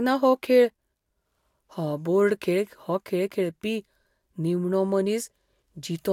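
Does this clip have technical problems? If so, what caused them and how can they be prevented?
No, nothing in this speech clip stood out as a technical problem on listening, so there is no cause to trace and nothing to prevent.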